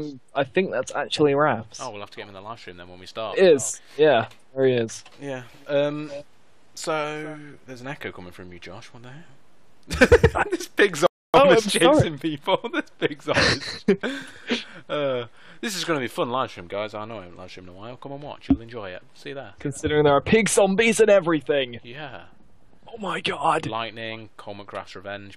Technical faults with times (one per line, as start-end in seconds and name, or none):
11.06-11.34 rebuffering stall